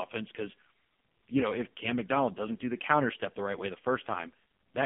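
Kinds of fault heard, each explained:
AMR narrowband mobile codec: the speech is confined to about 150 Hz to 3.4 kHz and sounds heavily buzzy and synthetic, consistent with the low 5.15 kbps mode.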